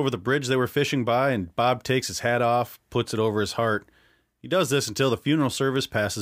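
Listening to the speech in this recording, nothing technical stood out as a problem at any point.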